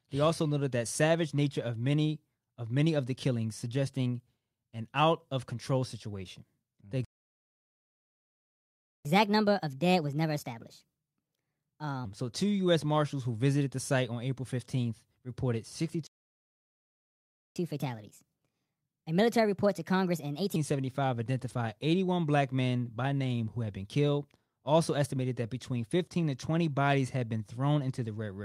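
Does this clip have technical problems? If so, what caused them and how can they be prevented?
Yes, there are two kinds of trouble here. First, a playback stall, twice: the speech cuts out at 7.05 s and stays silent until 9.05 s, a full 2 seconds, then drops out again from 16.07 s to 17.56 s, about 1.5 seconds. Both gaps sound like the player running dry, most likely from its buffer starving on late-arriving data or its audio thread getting blocked. A deeper playback buffer, with the audio thread kept at high priority, should prevent these.

Second, catch-up at higher speed right after each stall. When sound comes back at 9.05 s with "so two", it runs 1.25 times fast until 12.05 s, and again from 17.56 s to 20.56 s. The player is resampling its backlog to win back the lost time, so pitch climbs too, roughly four semitones, and things sound rushed and chipmunky before snapping back to normal. 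Time-stretching that preserves pitch, or a gentler speed-up, would keep catch-up from being so audible.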